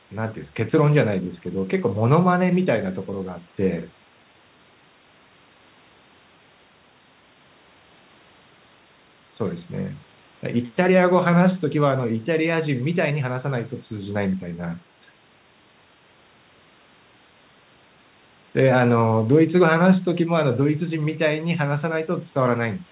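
No technical faults are audible.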